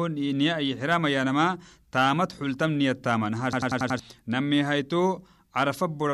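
From 3.53 to 3.99 s a rapid stutter takes over: one 93 ms fragment repeats five times at about 10.8 per second. This is a system hang loop. Playback froze while the hardware kept replaying its ring buffer, which fits a 4096-sample buffer, and roughly half a second of audio is lost.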